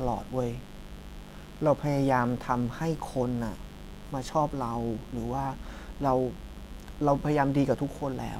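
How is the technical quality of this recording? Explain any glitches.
The recording is compromised by mains buzz running under the speech from start to finish. Sharp spikes repeating twice per 50 Hz cycle stack harmonics into the kilohertz range, producing a steady raspy edge sitting roughly 20 dB below the voice. That brightness separates it from smooth, low mains hum.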